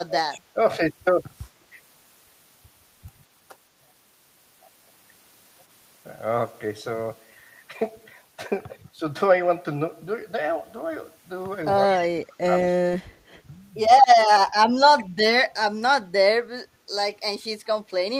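Right from the start, 0 to 0.58 s, the speech dips by up to about 30 dB, likely speech suppressed in double talk. The canceller ducks everything while both sides overlap. It happens again at 11.86 to 13.05 s for about a second, then lightly, about 5 dB, at 14.0 s. There's also echo leak: faint copies of the voice returning 167 ms late, about 20 to 35 dB down, at 0.3 to 0.4 s, 11.95 to 12.06 s, 14.99 to 15.04 s and 17.88 to 17.92 s. Those are likely from a speakerphone's canceller missing some pickup.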